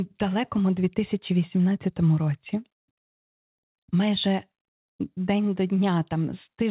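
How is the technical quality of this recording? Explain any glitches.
The recording has no glitches to explain; the speech comes through a G.711 telephone-band call path that carries nothing above 4 kHz.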